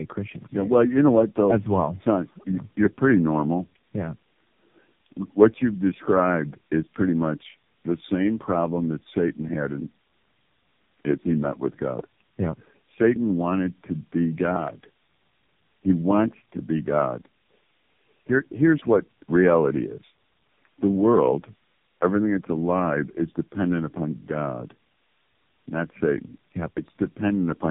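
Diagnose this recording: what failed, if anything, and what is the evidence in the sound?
The fault lies in the codec stage, and it runs through the whole clip. This speech is band-limited with nothing above 3.7 kHz. It is rough, muffled and warbly, worse than any single narrowband codec would leave it. That points to tandem speech coding: three AMR-NB passes linked by G.711 mu-law hops, the later ones sounding like 6.7 kbit/s. Each encoder re-codes the previous one's artefacts, so the distortion accumulates instead of staying at one codec's level.

At 14.56 to 14.70 s, just after "wanted to be", a loud pop arrives as two sharp clicks in quick succession, peaking about 15 dB above the speech. The speech continues underneath without a gap or a level change, which separates this from a dropout or a buffer glitch. An additive transient from the analogue wiring, such as a connector or static discharge, is the likely cause. 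The circuitry downstream shapes each spike into a brief thump.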